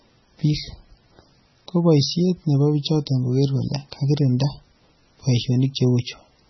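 From start to finish the speech carries heavy MP3 compression damage, which likely comes from encoding at a very low bitrate, consistent with about 16 kbps. Starved of bits, the encoder removed everything above 5.9 kHz and dropped weak frequency lines that flicker in and out frame by frame, giving a watery, swirling quality with metallic chirps on s sounds and smeared attacks. A spectrogram would show a hard ceiling at 5.9 kHz and patchy, blocky holes below it.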